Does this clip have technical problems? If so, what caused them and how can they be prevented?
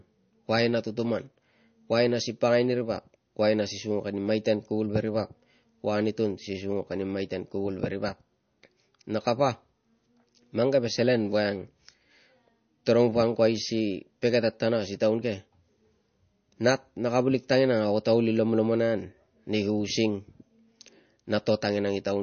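Yes. Throughout the speech, the top end stops at 6.4 kHz and the sound turns watery and swirly, with smeared attacks. This is likely MP3 compression starved of bits, which fits a rate around 32 kbps. Encoding at 128 kbps or higher prevents it.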